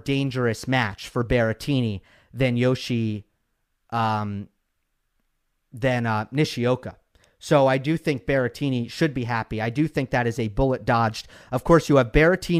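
Speech recording with no audible technical faults.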